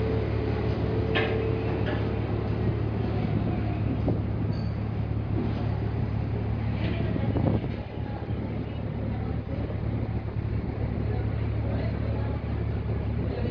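No technical faults are audible.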